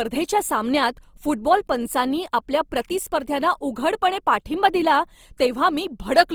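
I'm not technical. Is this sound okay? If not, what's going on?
No. The speech sounds rough and grainy from start to finish. Clear parts take on a noisy, sandy texture. This is likely Opus compression. It saves space by filling missing detail with copied or noise-like sound, which causes this graininess.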